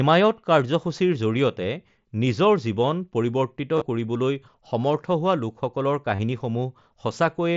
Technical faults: concealed Bluetooth headset packet loss

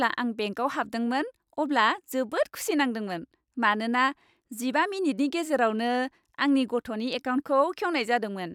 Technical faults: none

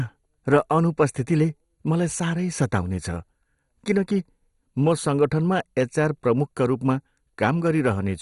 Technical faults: MP2 compression; bit error spike

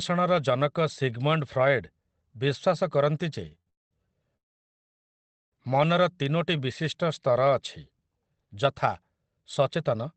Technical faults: short stall from a late packet; call audio freeze; jitter buffer slow-down

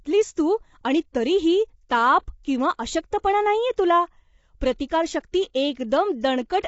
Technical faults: low-delay AAC compression

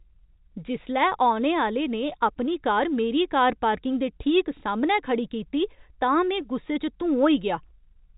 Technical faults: none

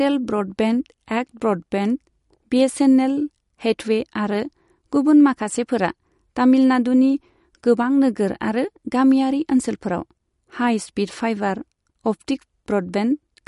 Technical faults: MP3 compression

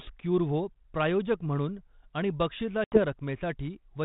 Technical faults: packet loss on an ADPCM call

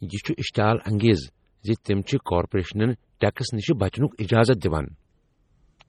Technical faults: MP3 compression; pre-echo

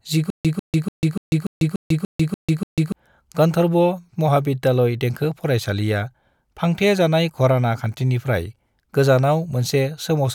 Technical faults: stutter with silent gaps

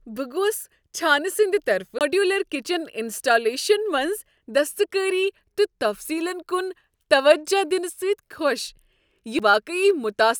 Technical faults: CD skip

